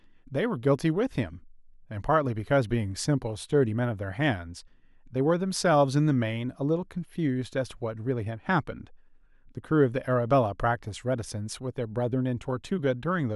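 No technical faults are audible.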